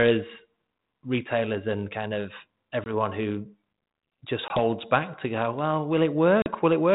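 Packet loss on an ADPCM call hits at 2.84 s after "retailers and kind of", at 4.48 s before "back to go well", and at 6.42 s after it. Hard silent gaps of about 20, 20 and 40 ms cut the speech, each roughly one or two packets. The ADPCM decoder's predictor and step size lose track, so speech resumes slightly distorted before settling.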